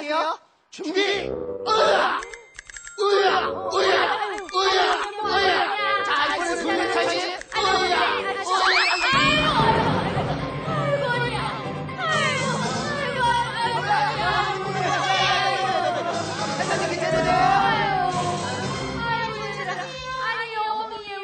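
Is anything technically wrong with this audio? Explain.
Yes. A doubled audio track runs through the whole clip: every sound is followed by a second, full-band copy about a tenth of a second later and at roughly the same loudness. This likely comes from the signal being picked up twice, once through a slower path, or from two copies left out of step. Unlike a room echo or reverb, the copy repeats only once, never decays, and has no added room colour.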